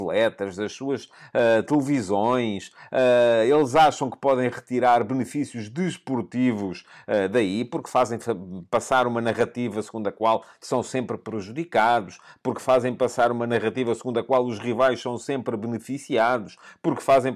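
A speech recording with no technical faults to report. Nothing in the signal chain calls for comment at any point.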